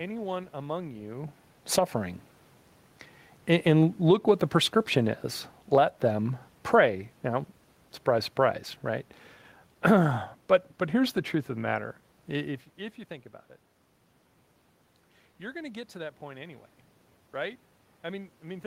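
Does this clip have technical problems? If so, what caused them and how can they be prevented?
Yes. Automatic gain falling runs from 3.95 s to 12.6 s: the automatic gain control judged the input too loud or its background noise too strong and pulled its gain down gradually, by about 6 dB over those nine seconds. The speech and the room noise behind it sink together, unlike the level shifts near 1 s and 12.5 s, where the talker moved relative to the microphone. To prevent this, set the input level correctly beforehand and disable the automatic gain control, or slow its response.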